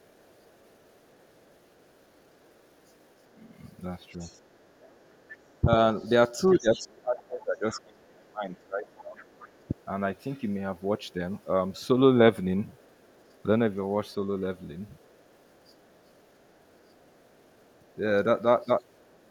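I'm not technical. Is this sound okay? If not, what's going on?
No. Two problems can be heard.

The first is the other side's voice leaking through. A second voice sits faintly behind the main talker from 0.01 to 5.6 s, 9.2 to 11.44 s, 12.71 to 17.93 s, and 18.87 s to the end. It is very quiet in the longest stretches. It gets clearer in two short scraps, at 6.52 to 6.79 s and 7.72 to 7.79 s. The likely cause is a loudspeaker playing the far end, with the echo canceller not removing all of it.

The second is speech suppressed in double talk. Between 3.35 and 9.74 s, the main voice keeps dipping in pieces, about three seconds in all. At its worst it is turned down sharply. This happens while the other voice is also present. The system likely could not tell the talker from the echo, so it turned both down.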